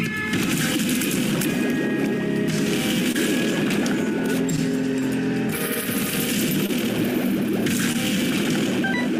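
There are four spots of short concealed packet loss: 3.12 to 3.16 s, 4.56 to 4.59 s, 6.66 to 6.70 s, and 7.93 to 7.96 s. Each time, about 20 ms of audio didn't arrive at the decoder in time, so the receiver padded the gap by extending whatever was playing just before and then faded back into the real signal. You hear each one as a quick smear or little wobble.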